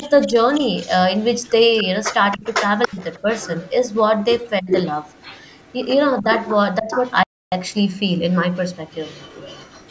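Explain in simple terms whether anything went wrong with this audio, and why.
The echo canceller was likely overwhelmed when both sides talked at once, so it turned the talker down too. This speech suppressed in double talk makes the voice dip or drop out at 0.0–0.35 s, 2.33–3.26 s, 4.61–4.7 s and 6.21–6.95 s.

A loudspeaker's sound likely slipped past the far end's echo canceller. This echo leak brings back a delayed copy of the voice, about 0.29 s late from 0.0 to 5.74 s, then about 0.42 s late from 6.37 to 7.13 s and from 7.69 s to the end.

The player likely ran out of data briefly. This playback stall makes the sound stop dead from 7.23 to 7.52 s, roughly 0.29 s of silence.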